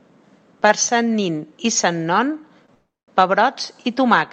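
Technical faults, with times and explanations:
2.66–2.71 s, short stall from a late packet: A packet arrived after its playout time, so the jitter buffer briefly ran dry. The receiver stretched the last stretch of sound by about 23 ms to cover the wait, then resumed exactly where it had stopped. Nothing is lost, but one sound is held slightly too long with a faint buzzy smear, and everything after it plays 23 ms later than before.
2.74–3.13 s, call audio freeze: The sound stops moving forward for about 335 ms. The receiver carries the last sound on as a fading buzz, and for about 210 ms of that span there is only silence. The audio then picks up from the point where it froze, so nothing is skipped, but a gap is inserted and the rest of the clip runs 335 ms later. The likely cause is packets held up in transit, leaving the jitter buffer empty for the whole wait.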